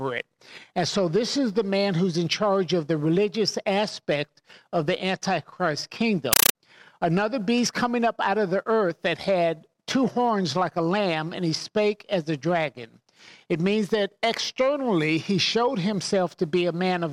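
At 6.33 s the playback chain stopped decoding and began treating an encoded Dolby Digital stream as plain PCM: a compressed stream played as audio. Until 6.55 s the sound is replaced by harsh, very loud static that chatters at 31.25 Hz, each 8 ms noise burst being one packed frame of data followed by zero padding. The burst pattern fits an AC-3 stream at around 384 kbps passed undecoded over S/PDIF or HDMI.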